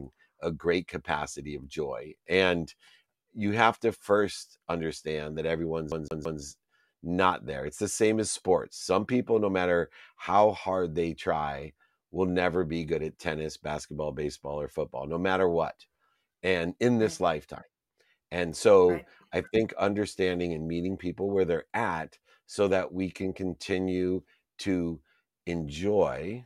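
Right after "to first understand that", at about 5.92 s, the speech hits a CD stuck on one turn: a scratch keeps bouncing the laser back, so a 0.17 s slice plays three times with a tiny mute at each jump. It's a quick, even stutter that clears by 6.42 s.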